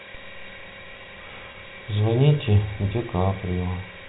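At 1.52 to 1.54 s the speech briefly holds a slightly buzzy, sustained tone before carrying on. This is packet loss with pitch repetition: about 20 ms went missing, which fits two lost packets, and the receiver bridged the gap by repeating the last pitch period of the telephone-band G.711 audio.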